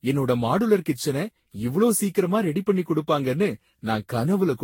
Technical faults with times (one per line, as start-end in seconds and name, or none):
0.00-4.63 generation loss